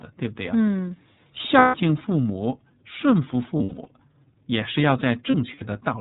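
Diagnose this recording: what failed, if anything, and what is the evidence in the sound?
Codec stage: the iLBC codec limits the audio to below 4 kHz, and the speech sounds rough and slightly synthetic throughout. This fits a 13.33 kbps mode with 30 ms frames.

Network stage: lost iLBC frames at 1.58–1.75 s, 3.57–3.89 s and 5.31–5.62 s, with the last two broken up. The concealment is heard as a held, buzzy vowel, and clean speech returns immediately after each gap.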